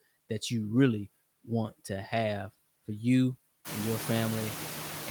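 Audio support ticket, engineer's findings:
Noise suppressor artifacts, whole clip: suppressor cutting bands it classifies as steady noise by about 16 dB, frame by frame. The background drops out between words and comes back up under them, pumping audibly; room noise rises about 18 dB around 3.5 s.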